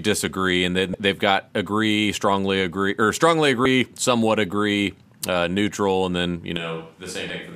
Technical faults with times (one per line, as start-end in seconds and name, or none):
0.91-0.94 damaged data in a compressed stream
3.63-3.66 damaged data in a compressed stream
6.57-7.55 switch to a distant microphone
7.27-7.30 damaged data in a compressed stream